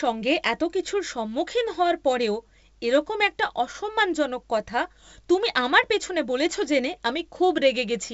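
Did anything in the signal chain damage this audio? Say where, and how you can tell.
No, nothing in the signal chain has damaged this speech. The path is G.722 wideband telephone coding at 64 kbit/s, which keeps the speech's bandwidth up to about 7 kHz, and any sign of its coding is faint at most.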